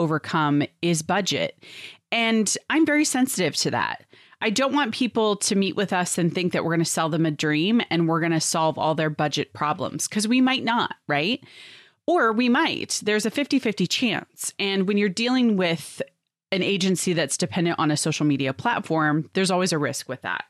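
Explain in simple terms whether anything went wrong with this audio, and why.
Nothing went wrong here.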